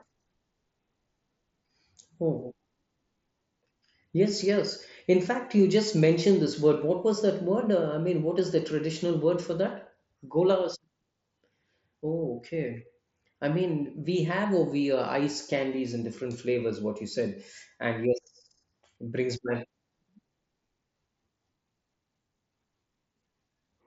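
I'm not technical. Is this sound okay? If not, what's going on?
Yes, nothing in this speech recording is faulty. It sounds like it came through a Bluetooth headset using the mSBC codec, which leaves out the very highest sounds above about 7.7 kHz and adds a faint graininess, as that kind of headset link normally does.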